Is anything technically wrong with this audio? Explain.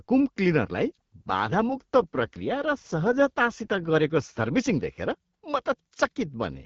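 Yes, there's an AMR rate drop from about 0.79 s to 4.60 s. The speech turns rougher and more synthetic there, with no gap and no loss of bandwidth. It sounds like the network pushed the AMR-WB codec down from 12.65 to roughly 8.85 kbit/s, probably because of a weak radio link, spending the freed bits on error protection. With fewer bits for the vocal tract model, the voice gets raspier until the rate climbs back and the light HD Voice sound returns.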